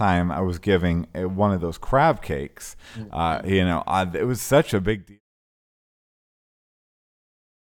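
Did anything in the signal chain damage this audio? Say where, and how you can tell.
No, nothing in the signal chain has damaged this speech. The smooth fade-out that begins around 4.5 s and reaches silence at 5.21 s is an ordinary editing fade, with the level tapering gradually and no click or hard edge at its end.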